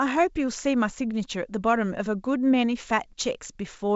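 Nothing in this speech recording points to a technical fault; it carries the bandwidth of G.722 wideband telephone coding at 64 kbit/s, with at most a faint trace of that codec's upper-band coding.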